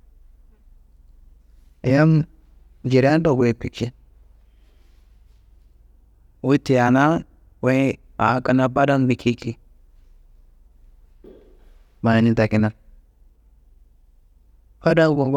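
No technical faults can be heard anywhere in the speech.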